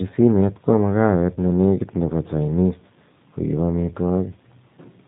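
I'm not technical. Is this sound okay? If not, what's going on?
No. The whole clip has gone through the G.729 codec, a phone-network speech coder that rebuilds the voice from a simplified model. Everything above 4 kHz is cut, so the speech sounds muffled, slightly rough and synthetic throughout, though it stays understandable.

At 1.34 to 1.38 s there is VoIP packet loss concealed by the speech codec. A short piece of audio, about 20 ms, which fits one lost packet, never arrived, and the decoder filled the gap by stretching the preceding sound, giving a brief weakened patch before the speech recovers.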